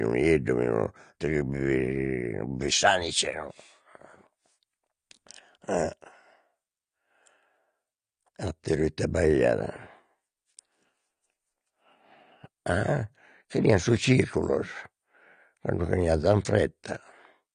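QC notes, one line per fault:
Throughout: AAC compression. The speech is band-limited with nothing above 9.8 kHz, so it sounds dull, and there is plainly audible smearing with a warbly, fizzy edge on sibilants. That points to an AAC-LC encode at about 32 kbps, likely a low-rate stream.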